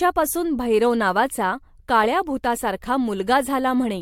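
No technical faults can be heard anywhere in this speech recording. At no point does the sound itself go wrong.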